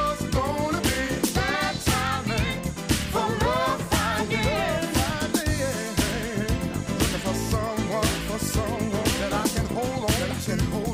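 A steady stream of sharp, uneven clicks runs through the sound from 0.19 s to 10.85 s, roughly every 0.15 s, about seventy in all. These are word clock ticks: the receiving device is likely running unlocked from the sender's clock, off by something like 150 ppm, so each slip misreads a few samples and drops or repeats one.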